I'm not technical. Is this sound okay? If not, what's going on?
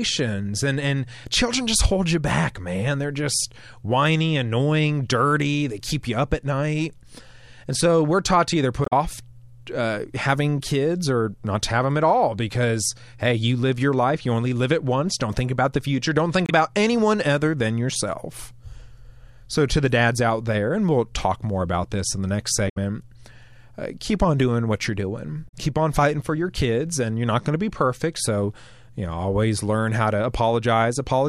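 No. The speech has four short glitches, at 8.82–8.93 s, 16.46–16.52 s, 22.65–22.77 s and 25.45–25.54 s. This is damaged data in a compressed stream. Parts of the file were corrupted, so the player briefly garbled the sound before recovering.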